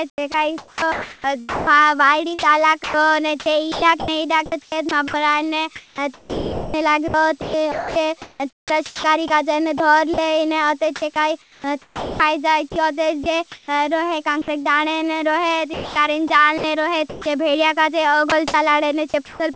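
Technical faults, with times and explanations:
0.10–10.18 s, 11.00–14.68 s (ending just before "जपने ने रोहे"), 15.74–17.26 s, 18.30–19.40 s: sound chopped by the voice detector. The sender's detector, likely, kept toggling transmission off, so quiet syllable edges became comfort noise (about 3.2, 0.9, 0.5 and 0.3 s). The result is choppy audio with holes.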